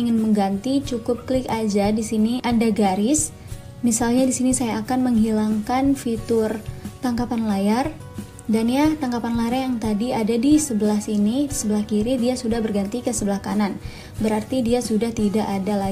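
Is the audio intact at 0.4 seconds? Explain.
Yes, at 0.4 seconds the audio plays through intact, with no dropout, click, distortion or other fault at that point.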